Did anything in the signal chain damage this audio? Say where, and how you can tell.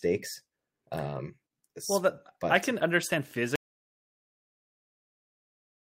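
Yes: an audio dropout to silence from 3.56 s to the end, right after "I can understand", with no room tone, likely an input lost at the device or link while the recorder kept writing silence.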